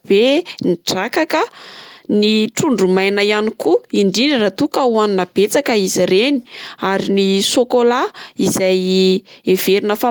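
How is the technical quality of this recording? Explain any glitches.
Nothing in the technical quality of the recording stood out on listening, so there are no glitches to explain.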